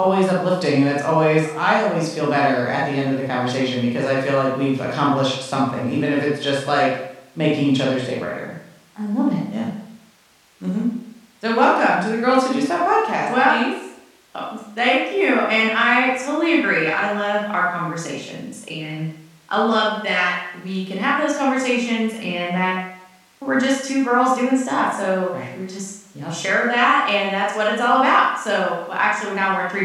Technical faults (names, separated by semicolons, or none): none